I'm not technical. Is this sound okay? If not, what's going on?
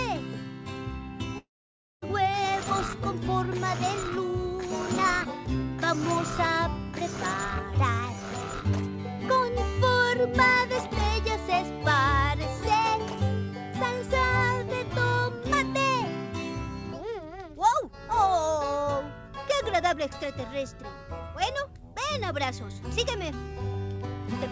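No. From 1.38 to 2.04 s there is a long network dropout, likely: the sound smears into a fading buzz, then about half a second of silence, and some audio is simply lost.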